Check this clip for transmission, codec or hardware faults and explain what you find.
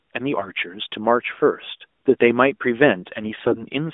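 Two bursts of AMR bit errors affect this speech, heard through an AMR narrowband mobile codec that passes roughly 250 Hz to 3.6 kHz. The first is 0.40 to 0.52 s, heavier, with about one bit in seven flipped. The second is 3.24 to 3.63 s, milder, about one in fourteen. Corrupted frames misplace excitation pulses and skew gain and spectrum, so the voice turns hoarse and gargly. Unlike frame loss, pitch and level carry on without gaps.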